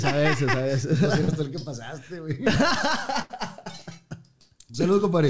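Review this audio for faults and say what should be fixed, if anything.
At 1.24 to 1.30 s there is a short concealed packet loss. About 40 ms of audio never reached the decoder in time, and the receiver covered the hole by extending the last sound it had, matching its pitch where the signal was tonal and using shaped noise where it wasn't, before crossfading back into real audio. The result is a brief smear or wobble. Prevention: give the jitter buffer enough headroom, or add forward error correction, so single late packets arrive in time to play.

At 3.22 to 3.32 s there is a burst of packet loss. Several consecutive packets, about 80 ms of audio in total, were dropped or arrived too late. Concealment stretched the last sound and faded it as the gap grew, so it becomes a held buzz or a dying hiss. Playback then picks up further along, with that stretch of audio simply gone. The whole clip stops at 8 kHz, consistent with a wideband call codec such as G.722. 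Prevention: reduce bursty loss on the network path, for example by fixing congested links or Wi-Fi contention, and use redundancy or FEC that can cover several packets in a row.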